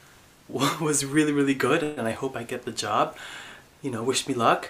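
At 1.83 s the sound stalls for roughly 0.16 s, until about 2.00 s, in what sounds like a call audio freeze. The last bit of audio gets stretched into a short buzzy tail that fades off instead of dropping to dead silence. The likely cause is packets getting held up in transit so the jitter buffer ran dry. When things resume, nothing's been lost. The audio just picks up where it stopped, now running about 133 ms later than before.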